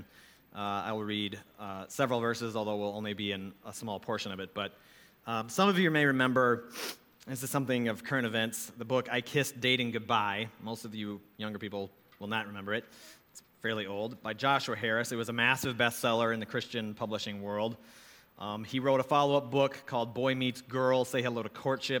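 No faults to report: nothing in the signal chain audibly went wrong at any point in the recording.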